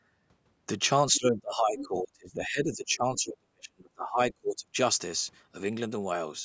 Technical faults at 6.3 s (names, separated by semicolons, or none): none